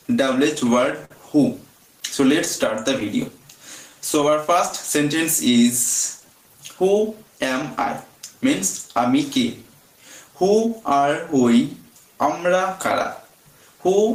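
Right from the start there's gain pumping. The level ducks by roughly 10 dB whenever something loud comes in, so the whole thing sounds squashed. That's likely the input gain set way too high with a fast limiter clamping down on every peak.

Underneath it all there's clock drift between sender and receiver. The sender's clock seems to run about 4% slow, so the receiver's jitter buffer keeps draining and has to be topped up. You hear that as a faint, recurring unsteadiness in timing across the clip.

The repeated timing corrections run from 0.24 s to 13.96 s. The receiver keeps stretching short pieces to cover the shortfall, playing at about 98% speed and adding around 300 ms overall. The edits all go the same way but land unevenly, so the tempo feels slightly lopsided, with the odd small hiccup.

Between 1.05 s and 7.86 s there are scattered short gaps, around ten of them, the longest about 50 ms. 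Each late or lost packet got patched by carrying the last bit of sound forward, so you catch brief ticks and little smears here and there.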